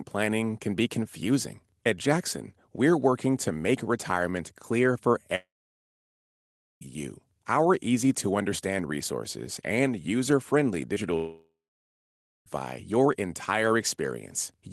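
At 5.35 s, just after "make retirement clear for", the audio breaks off in what is likely a long network dropout. The receiver carries the last sound on briefly as a fading buzz, then leaves about 1.3 s of near-silence. Sound resumes at 6.83 s with roughly 1.5 s of material simply gone, so the sentence jumps forward rather than picking up where it stopped.

Shortly after "resources and user friendly", a short concealed packet loss occurs at 10.95 to 10.98 s. About 20 ms of audio failed to arrive in time, and the decoder patched the gap by extending the preceding sound before blending back in. It is heard as a brief smear or wobble.

Only 0.18 s later, at 11.16 s, a second long network dropout, again likely, takes out 1.3 s, up to 12.48 s. The concealment tail is longer here, and the near-silence after it lasts about 0.9 s before the audio returns with that stretch missing. Throughout, the call codec's coding noise and a top end limited to about 12 kHz are audible, which fits Opus at around 20 kbps.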